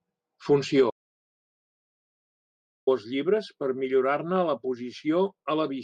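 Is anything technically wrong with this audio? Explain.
Yes. An audio dropout to silence runs from 0.90 s to 2.87 s, removing about 1.97 s of the speech. The input signal was likely lost for that stretch, through a disconnected device, a broken link or an accidental mute, while the recording carried on writing silence. The speech cuts off abruptly mid-flow and then resumes just as suddenly. The gap is dead silence with no room tone at all, and whatever was said during it is gone.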